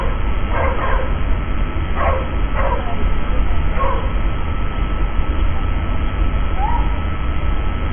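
A steady mains buzz runs through the whole recording of everyday sounds, sitting roughly 20 dB below the wanted sound. Its fundamental is 50 Hz, but the edge comes from the harmonics stacked above it. Sharp switching spikes, twice per mains cycle, from something like a dimmer, a rectifier or an unshielded run, get into the signal path and spread energy well up the spectrum. The result is a raspy, constant drone under everything.

For the full length the audio is also dull and band-limited, with nothing above 3.4 kHz. Within that band the texture is smeared and unstable, with a warbling, fizzy quality on sustained sounds where the spectrum has been coarsely quantised. This points to heavy AAC compression, likely AAC-LC at a very low bitrate around 16 kbps. At that rate the encoder lowers its cut-off and leaves gaps in the spectrum.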